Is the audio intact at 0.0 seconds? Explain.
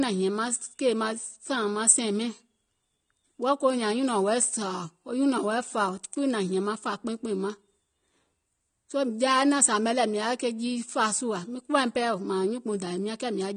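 No. AAC compression is present at 0.0 s and throughout the clip: nothing sounds above 9.7 kHz and the damage is plainly audible, dull and smeared, with a warbling, fizzy edge on sibilants, likely from AAC-LC coding at a low rate, about 32 kbps.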